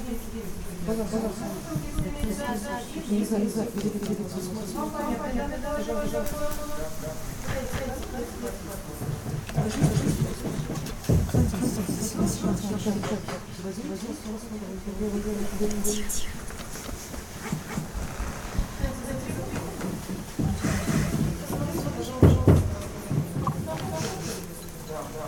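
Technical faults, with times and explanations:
Throughout: doubled audio track, a full-band copy trailing about 300 ms behind at roughly equal level with no room colour, likely from a second, slower capture path.
10.75–10.91 s and 23.42–23.54 s: frames out of order, with adjacent 72 ms then 48 ms blocks swapped, giving garbled flutter, without lost time.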